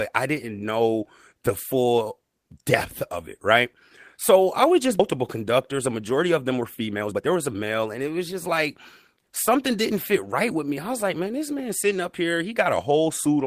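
At 4.99 s the speech lurches forward with no pause: about a second of talk simply never arrives, and the sound on either side of the cut is butted together almost seamlessly. This is a skip ahead. A run of audio was discarded, either lost in transit or dropped when the jitter buffer overflowed while later audio was already queued, so playback leapt past the gap and the latency fell by roughly a second in one step.

From 6.61 s to 8.49 s the speech comes out rushed, running at about 122% of normal speed while the pitch stays where it was, so it sounds hurried rather than higher. This is a jitter buffer speed-up. The buffer was holding more audio than its target, so the receiver repeatedly trimmed short slices one or a few pitch periods long, removing something like 400 ms in total to pull the delay back down.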